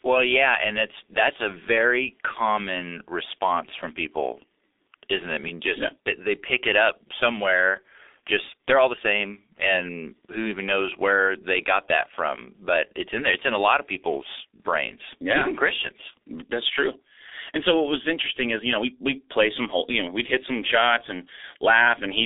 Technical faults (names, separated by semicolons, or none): G.723.1 codec